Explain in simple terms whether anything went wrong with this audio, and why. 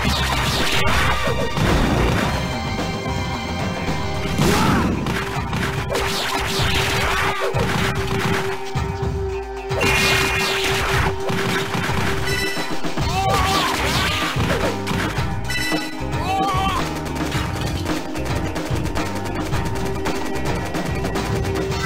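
Nothing went wrong here; I hear no technical problems.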